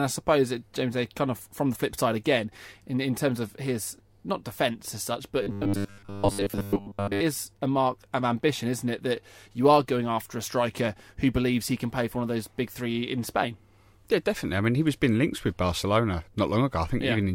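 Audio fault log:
5.43–7.21 s: robotic sound from repeated short buffers, between "defence as such but" and "is a mark of". Speech turns into a rigid, metallic buzz at 100 Hz. Most of the audio is likely being skipped and replaced by repeats of a buffer near 10 ms long.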